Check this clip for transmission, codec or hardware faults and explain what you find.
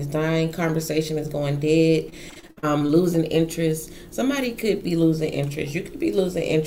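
Repeated packet loss (robotic sound) affects 2.09 to 2.91 s: packets kept failing to arrive, and each hole was filled by extending the preceding audio. Roughly a third of the stretch is patched this way, with gaps up to 56 ms, giving a choppy sound with pieces missing.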